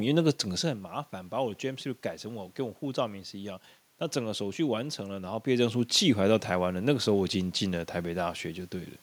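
Nothing is technically wrong with this speech recording; the background room noise and the level changes around half a second and five and a half seconds in, as the talker moves relative to the microphone, belong to the recording itself.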